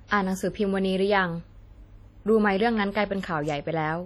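WMA compression, throughout the speech: the sound rings and turns washy, with a hiss that swells and falls with the signal. This heavy damage likely comes from a transform encoder spreading quantisation noise across long blocks and zeroing weak components, which fits a bitrate near 32 kbps.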